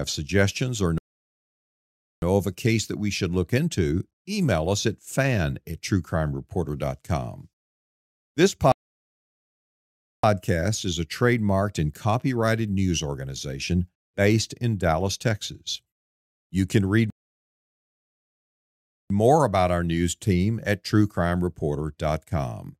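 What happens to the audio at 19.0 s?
At 19.0 s the speech is in a playback stall: after "can read" it cuts to silence at 17.10 s for 2 s, then resumes with "more about our news" at 19.10 s. The player likely ran out of buffered data or had its output thread blocked.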